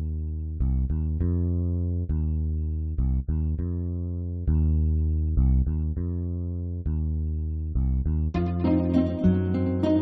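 No technical faults can be heard in this audio.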